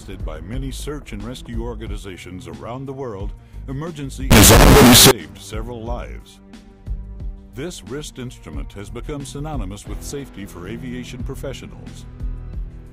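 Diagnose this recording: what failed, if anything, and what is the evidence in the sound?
Sample-format conversion failed, likely signed and unsigned mixed up on 16-bit samples. From 4.31 to 5.11 s, very loud, harsh distortion buries even quiet sound.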